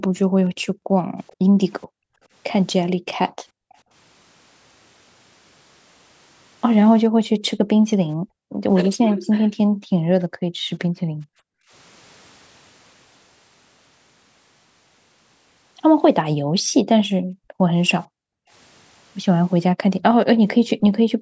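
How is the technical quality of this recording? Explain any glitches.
The speech comes through with two call-related faults: the background repeatedly drops away, and a faint delayed echo slips through twice.

Background gated by the echo canceller: between 0.24 and 2.22 s, 3.52 and 3.85 s, 7.1 and 11.71 s, 16.43 and 18.51 s, and from 21.15 s to the end, the room tone dips sharply, by about 40 dB at its deepest, and then returns. These are brief holes, a third of a second in the short span and about three seconds in total across the long one. They happen while the loudspeaker is playing. The echo canceller clamps the microphone down and releases it afterwards.

Echo leak: at 1.27 to 1.33 s and again at 2.87 to 2.91 s there is a brief, very faint ghost of speech, roughly 30 dB below the main level, trailing the original by 430 ms. It sounds like a clipped scrap rather than a full repeat. 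The likely cause is that the canceller on the loudspeaker side missed part of what its microphone picked up, and that residue was sent back down the line. The call's microphone processing is also audible in the missing top end, with nothing above 8 kHz, which is expected for this path.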